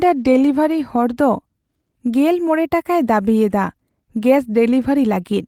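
Just a short bit of speech here, and there's nothing technically wrong to point out anywhere in it.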